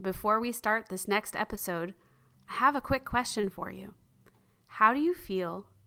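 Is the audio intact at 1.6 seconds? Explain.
No. Right around that moment, just after "we start this next", there is a short concealed packet loss from 1.55 to 1.59 s. About 20 ms of the speech never reached the decoder in time. The receiver covered roughly 15 ms of that gap by extending the preceding sound, then blended back into the real signal. The result is a brief smear or wobble, and a short consonant there may be lost.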